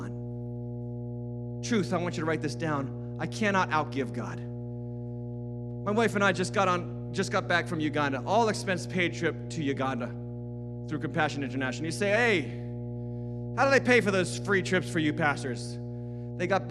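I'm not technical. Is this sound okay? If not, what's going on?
No. There is mains hum throughout the speech, a steady low buzz at 60 Hz sitting fairly loud under everything. It comes from the electrical supply leaking into the recording, likely through a ground loop or a nearby transformer.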